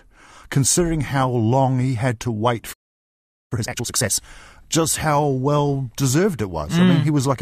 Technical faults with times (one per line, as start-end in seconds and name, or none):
2.73-3.52 playback stall
3.52-4.29 time-compressed catch-up